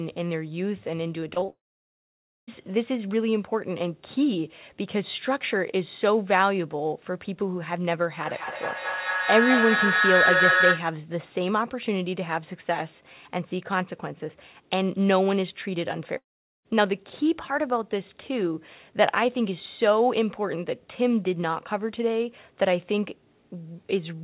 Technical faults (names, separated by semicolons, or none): clock slip clicks; repeated packet loss (robotic sound); long network dropout; feedback howl